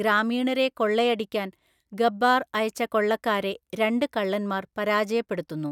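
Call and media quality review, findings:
No faults found in the speech recording. Nothing in the call or media path needs a ticket.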